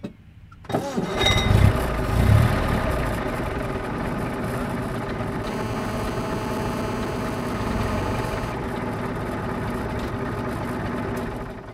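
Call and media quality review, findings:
GSM phone buzz, 5.44 to 8.52 s. Hard, raspy 217 Hz buzz full of harmonics, steady throughout, about 10 dB under the signal. A nearby 2G handset on a call is bursting, and the audio front end is rectifying those pulses.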